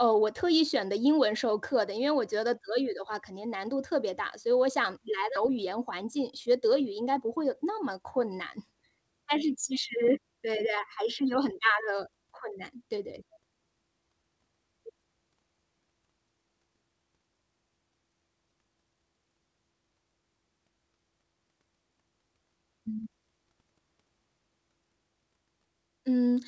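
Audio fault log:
5.36 to 5.38 s, skip ahead: The speech jumps forward with no gap. Roughly 0.7 s of audio is simply missing. The two sides are joined almost directly, so the sound lurches ahead mid-flow. This fits a jitter buffer discarding waiting audio to cut its delay.
5.47 to 8.01 s, jitter buffer speed-up: Right after the jump, the speech runs about 6% fast at unchanged pitch. It sounds slightly hurried. Around 150 ms in total was trimmed as many short pitch-period pieces, draining the excess buffered audio. This happens over a G.722-style call path with nothing above 8 kHz.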